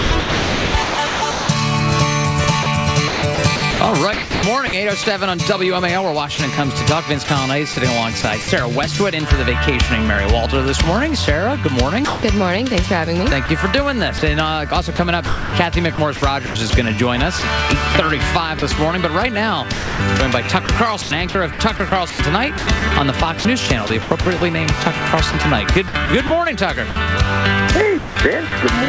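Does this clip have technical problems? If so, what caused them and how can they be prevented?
Yes. From 0.0 to 8.48 s and again from 12.05 to 28.52 s, the sound is chopped by the voice detector. Quiet edges drop into smooth synthetic hiss, about 2.1 s and 2.3 s in total, likely RFC 3389 comfort noise switching in. Unlike packet-loss concealment, the gaps fill with steady noise rather than repeated or smeared fragments. The call path's 8 kHz ceiling fits G.722 at 64 kbps. To prevent the chopping, disable the sender's voice activity detection or discontinuous transmission.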